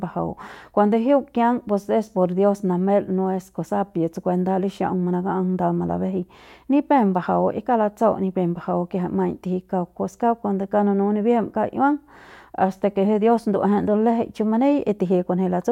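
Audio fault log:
Nothing to log here; I listened through the whole recording and didn't catch a single fault.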